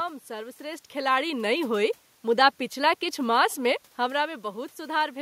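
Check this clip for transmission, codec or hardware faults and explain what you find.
No transmission, codec or hardware faults.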